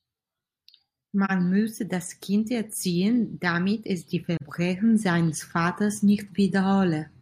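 Two short dropouts from AAC frame loss with muting: around 1.25 to 1.31 s, just before "müsse das", and 4.36 to 4.42 s, right after "erziehen damit es die". Each fits one lost frame of about 43 ms. The decoder zeroes it, so the speech fades out and back in, leaving a soft gap.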